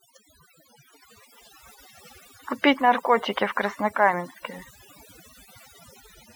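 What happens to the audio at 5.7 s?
At 5.7 s the clip shows overdone noise removal. It is not a brief event. It runs through the whole recording. A noise reduction process was pushed too hard. It cuts individual frequency bands deeply whenever they sit close to its noise estimate. Quiet parts of the speech fall below that line and vanish too. The background drops and breaks up into small twinkling specks.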